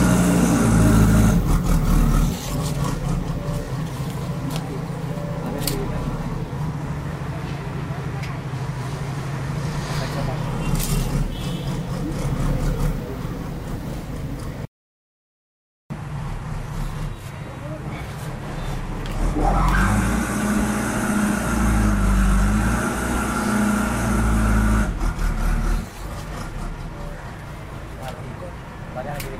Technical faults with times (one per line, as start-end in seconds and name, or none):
none